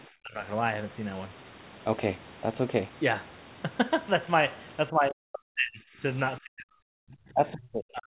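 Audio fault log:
0.22–0.44 s, 4.92–6.02 s and 6.39 s to the end, speech suppressed in double talk: the speech dips by about 15 dB in the first stretch, then by as much as about 40 dB later. This is likely an echo canceller turning down the talker while the far side spoke.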